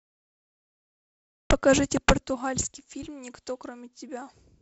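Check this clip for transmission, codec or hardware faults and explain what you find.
One fault stands out: a cut-off start. The G.722 wideband coding at 48 kbit/s can also be heard, with speech reaching up to 7 kHz, a light hiss in the upper band and some added noise in the lower band, but that is ordinary behaviour for the codec at that rate.

The cut-off start runs from 0.0 to 1.5 s. The capture or stream began late, so the first 1.5 s is pure digital silence and the speech then enters at 1.5 s already in progress, with no natural onset or fade-in. You hear dead quiet followed by a sudden jump into the middle of a sound. On a waveform the opening stretch is a flat line that breaks into signal with a vertical edge at 1.5 s. A spectrogram shows solid black before that point and a hard vertical boundary where energy appears across the band all at once.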